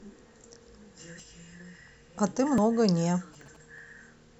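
At 1.2 s the sound jumps forward, skipping roughly 70 ms, and at 2.58 s a smaller jump of about 40 ms follows. Neither leaves a gap. Both are likely dropped buffers (overruns), where unread samples were overwritten and the remaining audio was spliced together.

From 2.86 to 3.79 s GSM signalling bursts from a nearby 2G phone add a galloping dit-dit-dit of short 217 Hz buzzes, about 30 dB below the speech, as the circuitry rectifies the radio pulses. Inside that stretch, at 3.41 s, another short skip of around 20 ms occurs.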